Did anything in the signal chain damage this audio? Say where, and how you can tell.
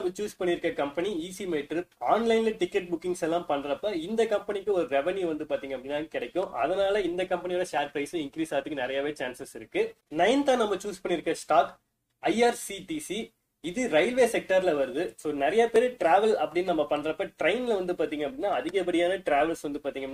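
Yes. Three tiny skips, each of a few milliseconds, land at 3.79, 7.78 and 15.76 s, where the waveform jumps instead of continuing smoothly. Their spacing follows a 4-second grid, which points to the boundaries between streamed segments. This is overlap between stream segments: at those joins the timestamps of adjacent segments overlapped, so the player discarded the supposedly duplicated stretch even though that sound existed only once, leaving a small gap and a discontinuity.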